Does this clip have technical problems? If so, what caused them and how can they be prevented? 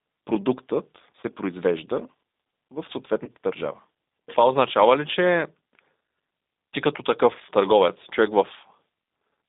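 Yes. The G.729 codec at 8 kbit/s runs throughout, band-limiting speech to 250 Hz–3.7 kHz with plainly audible synthetic roughness; a spectrogram shows empty bands above 3.7 kHz and below 250 Hz. Using a wideband codec such as G.722 or Opus prevents this.

VoIP packet loss concealed by the speech codec occurs at 1.21–1.24 s and 3.25–3.30 s. Each 20 ms gap, consistent with one lost packet, is filled by a fading extrapolation, visible as a dipping envelope. Jitter buffering and forward error correction prevent this.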